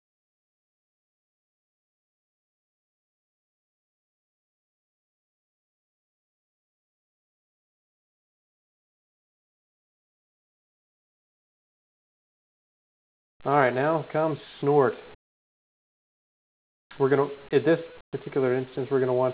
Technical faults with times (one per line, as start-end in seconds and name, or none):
13.43-13.73 jitter buffer slow-down
13.94-14.46 jitter buffer speed-up
15.15-16.91 comfort noise in place of the background
18.01-18.13 comfort noise in place of the background